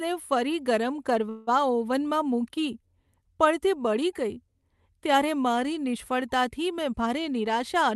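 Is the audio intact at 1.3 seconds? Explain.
No. From 1.29 to 1.49 s, just after "ફરી ગરમ", a call audio freeze stretches the sound into a fading buzz. Delayed packets likely emptied the jitter buffer. Nothing is lost, but speech resumes late.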